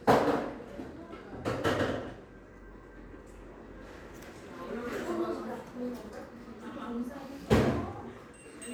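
Nothing stood out on listening to this everyday-sounds recording.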